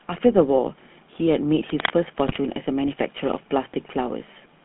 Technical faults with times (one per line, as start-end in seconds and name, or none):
0.00-4.65 GSM full-rate codec
1.69-1.91 cable scratch noise
2.26-2.39 GSM bit errors